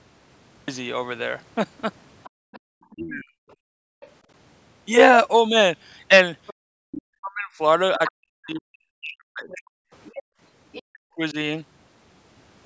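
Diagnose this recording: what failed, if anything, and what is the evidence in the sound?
The recording or storage stage produced a cut-off start. The speech begins mid-sound from digital silence, running from 0 to 0.68 s with no attack or fade-in. A natural pause would carry room tone; this is digital silence until the cut.

The other side's voice leaking through is heard from 2.24 to 4.1 s at about 30 dB below the talker, then more strongly from 6.47 to 10.82 s at about 20 dB below. The likely cause is loudspeaker echo that the call's echo canceller left in the microphone signal. It is a second voice, not crosstalk in the wiring.

The background is gated by the echo canceller. Room sound drops by up to about 40 dB in bursts totalling around 0.7 s between 2.3 and 4.01 s, again from 6.54 to 6.78 s, and across roughly 0.4 s between 10.23 and 11.02 s. These dips line up with the loudspeaker activity and return when it stops, so they are not a codec dropout.

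Speech is suppressed in double talk. The talker's own voice dips by around 40 dB, over roughly 0.4 s from 2.95 to 3.35 s and about two seconds in pieces from 7.06 to 11.36 s, while the far side is speaking. This is likely the canceller attenuating both voices, not network packet loss, because it only happens when both sides talk at once.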